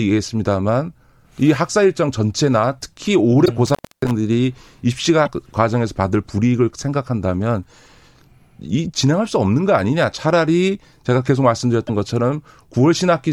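A speech recording with two kinds of fault. At 3.45 to 3.49 s, 5.25 to 5.28 s and 11.87 to 11.90 s, the likely cause is a broken MP3 bit reservoir. Frames appear to have been dropped, so the next frame reaches back into earlier space for its borrowed data and decodes bytes that belong to a different frame. The audio jumps forward and a garbled glitch lasting a frame or two replaces it, which fits 24 ms MP3 frames. Between 3.67 and 4.11 s there is an intermittent contact: a loose cable or plug opens the line for about 0.28 s. The speech drops out, with crackle at the moments the contact breaks and remakes, and faint hiss remains while the line is open.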